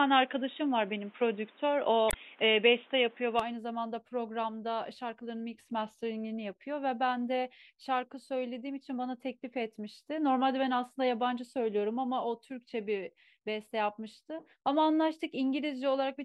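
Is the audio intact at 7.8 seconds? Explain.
Yes, at 7.8 seconds the audio is intact, with no dropout, distortion or other fault to be heard at that moment.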